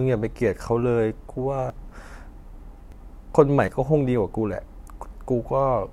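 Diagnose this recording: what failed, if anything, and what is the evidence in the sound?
The capture side most likely suffered a dropped buffer (overrun) at the driver or buffer stage: audio arrived faster than the recording program collected it, so chunks were overwritten and the surrounding speech was spliced straight together. Each event is an abrupt forward jump with no gap of silence, at 1.7 s (roughly 70 ms skipped), 2.92 s (about 40 ms) and 3.68 s (about 20 ms).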